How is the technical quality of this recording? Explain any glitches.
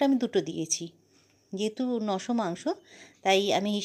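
No glitches are audible, with nothing breaking up, dropping out or jumping anywhere in the recording.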